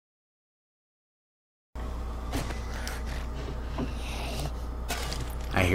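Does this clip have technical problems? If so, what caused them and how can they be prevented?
Yes: a cut-off start. The audio sits in digital silence until 1.76 s, then the sound begins abruptly mid-way with no attack or fade-in, because capture began late. The waveform shows a flat line jumping straight to full amplitude, and the spectrogram shows a sharp vertical edge after an empty stretch. To prevent it, arm and start recording with a pre-roll buffer before the sound begins.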